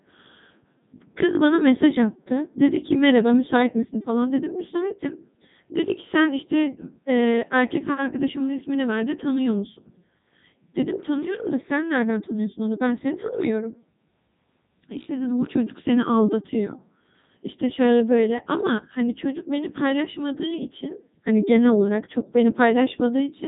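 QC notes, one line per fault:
throughout, Codec 2 vocoder: the speech was reduced to pitch, voicing, energy and a coarse spectral envelope, then rebuilt from sine waves, discarding the original waveform. It sounds heavily robotic and buzzy, with nothing above 3.8 kHz, which fits the 3.2 kbit/s mode.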